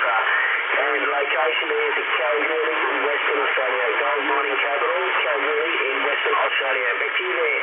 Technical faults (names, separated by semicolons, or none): none